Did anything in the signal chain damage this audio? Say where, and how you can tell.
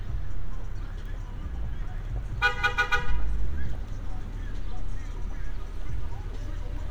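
Yes. At 2.05 s the sound jumps forward, with no gap of silence. This is most likely a dropped buffer (overrun) at the driver or buffer stage. A very short stretch, under about two milliseconds, was overwritten, and the two sides were spliced together.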